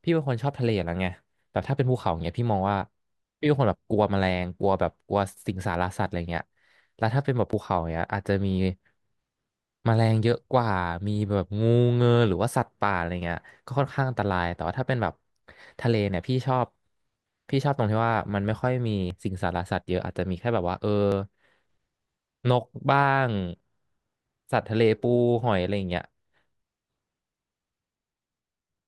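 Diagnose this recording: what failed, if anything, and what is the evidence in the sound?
The failure sits at the driver or buffer stage, and is likely a dropped buffer (overrun): the capture software fell behind and the hardware overwrote a block of samples before they were read. In this speech, the sound jumps forward at 7.53 s, losing roughly 10 ms, and again at 19.10 s and 21.12 s, each losing around 30 ms. There's no gap of silence. The audio on either side is simply butted together.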